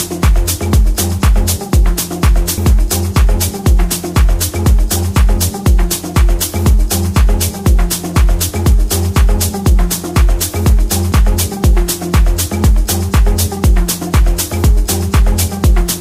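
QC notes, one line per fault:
2.58 s and 11.12 s, dropped buffer (overrun): an abrupt jump forward in the sound, skipping roughly 70 ms at the first point and about 20 ms at the second, with no gap. The likely cause is audio not being collected before the hardware overwrote it, so the two sides join directly.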